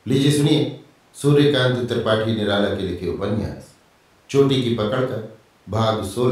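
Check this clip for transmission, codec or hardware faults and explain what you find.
No faults can be heard anywhere in this recording.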